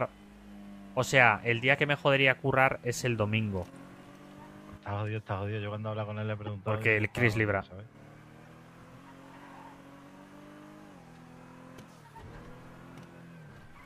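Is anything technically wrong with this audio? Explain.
Yes. A corrupt frame decoded at 6.46 to 6.49 s and again at 8.45 s: a single damaged compressed frame was played anyway, so misread data put energy at the wrong frequencies. Each is a brief chirp or blip. The first is stronger, with its error peaking around -25 dBFS, and the second is much fainter, around -45 dBFS.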